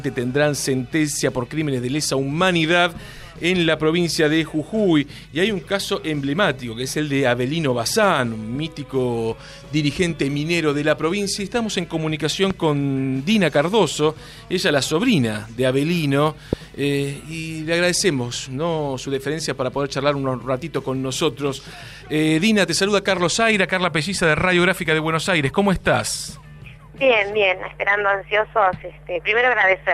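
A voltage spike, likely from a plug, switch or static discharge, hits the signal at 12.51 to 12.53 s and again at 16.53 to 16.55 s, each a single loud pop peaking about 10 dB, then about 15 dB, above the audio, which continues underneath.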